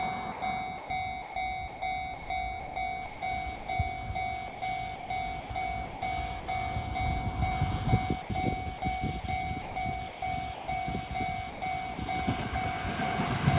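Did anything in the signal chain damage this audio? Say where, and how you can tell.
Yes. At the call-processing stage, the sound turns choppy from 0.32 to 3.68 s, 4.48 to 6.48 s and 8.22 to 11.98 s. Roughly 1.1 s, 0.62 s and 0.76 s of real sound give way to synthetic hiss. This is likely sound chopped by the voice detector, which gates transmission off and substitutes comfort noise.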